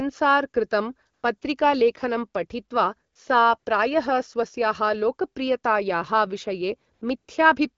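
AMR comfort noise replaces brief pauses at 1.13–1.23, 1.37–1.41, 3.13–3.15, 3.59–3.65, 6.93–7.01 and 7.17–7.27 s. Speech frames stopped, so smooth synthetic hiss substitutes the real background, switching abruptly.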